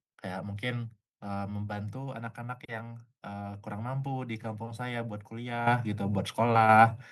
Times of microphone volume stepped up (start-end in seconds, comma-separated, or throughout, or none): 5.67, 6.69